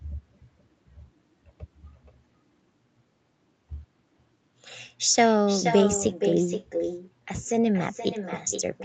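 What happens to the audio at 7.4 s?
At 7.4 s, as throughout the clip, there is echo with no canceller: the far end's loudspeaker output leaks into its microphone and returns uncancelled, so the speech is trailed about half a second later by a thinner copy roughly 7 dB quieter.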